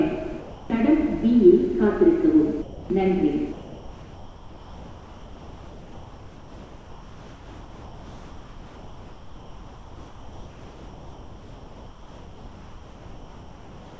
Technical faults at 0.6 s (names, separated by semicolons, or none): sound dropped by the voice detector